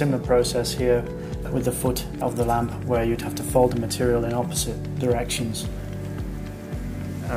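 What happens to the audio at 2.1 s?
Nothing goes wrong at 2.1 s; the audio plays through that moment intact, with no dropout, click or distortion.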